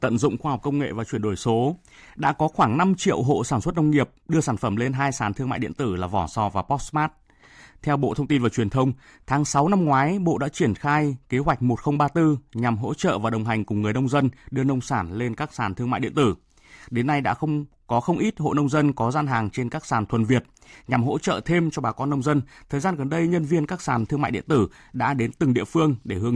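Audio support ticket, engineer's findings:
No audible faults found on listening; speech clip, nothing to attribute to any component.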